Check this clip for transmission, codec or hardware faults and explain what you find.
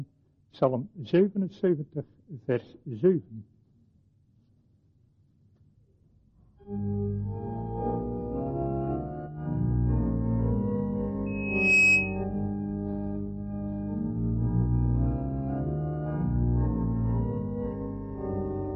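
One fault is present: loudspeaker feedback squeal from 11.26 to 12.24 s. The microphone picked up its own loudspeaker, and the loop gain passed unity at 2.6 kHz. That tone swelled over about half a second into a piercing squeal, about 10 dB above the surrounding sound.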